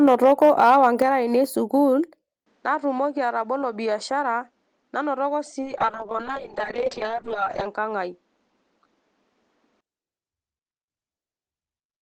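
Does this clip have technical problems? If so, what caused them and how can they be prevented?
Yes. From 0.07 to 1.02 s the peaks are flattened with a harsh crackle, about 3 dB over full scale, likely microphone overload at the converter. Set input gain lower before recording.

The level drops suddenly by about 6 dB at 1.02 s and about 3 dB at 2.04 s, likely the microphone volume stepped down by automatic gain control. Disable automatic input adjustment in the call software.

From 2.46 to 9.81 s the sound turns duller, with faint new noise about 40 dB below the signal, likely an input switched to a poorer device. Lock the input device selection.

From 5.63 to 7.73 s the audio turns rough and muffled, a call bitrate drop from 32 to 6 kbps lasting about 2 s at the lowest rate. Ensure stable network bandwidth during calls.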